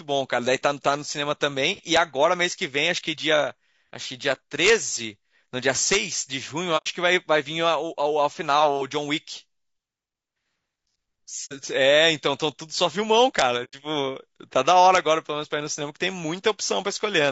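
Throughout, the speech sounds rough and grainy, with noise between harmonics and a dull, synthetic top band, likely from low-delay AAC compression at a low bitrate around 32 kbps. At 1.97 s, 4.65–4.70 s and 5.93–5.96 s, integer overflow wraps peaks pushed past full scale, by about 4 dB at 5.93 s, to the opposite sign, producing violent cracks far sharper than clipping. AAC frame loss with muting at 6.77 s (90 ms) and 11.45 s (60 ms) zeroes the decoded spectrum, leaving soft-edged holes. The same overflow returns at 13.39–13.42 s, another 90 ms muting hole follows at 13.64 s, and a final crack comes at 14.95–14.98 s.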